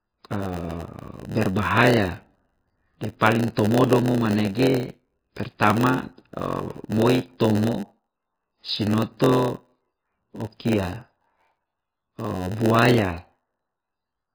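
From start to finish the speech sounds watery and swirly. The treble is missing, and s sounds chirp metallically. The damage is heavy, likely MP3 compression at a very low bitrate, around 15 kbps, cutting the treble and dropping weak detail frame by frame.

A steady buzz at 91.9 Hz also runs throughout. This is a block size mismatch (padded). Each block arrives short and is topped up with silence. That gap repeats at the block rate. The speech plays at 0.919 times normal speed, with its pitch roughly unchanged.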